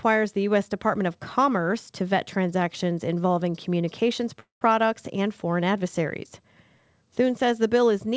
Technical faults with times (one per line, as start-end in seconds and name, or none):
4.40-4.64 call audio freeze